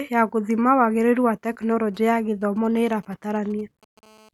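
A speech recording picks up two kinds of mobile-phone interference. From 1.47 to 3.99 s there are GSM signalling bursts: a galloping dit-dit-dit of short rasps at 217 Hz, roughly 30 dB below the speech. A nearby 2G handset exchanging brief control transmissions is being rectified by the audio circuit. Unlike a call, the energy arrives in clumps, never settling into a continuous tone. From 4.03 to 4.29 s it becomes GSM phone buzz, a continuous, hard, harmonic-rich 217 Hz rasp about 30 dB down, as the handset transmits its steady call-mode burst train. Its 217 Hz spacing and gritty edge set it apart from smooth 50 or 60 Hz mains hum.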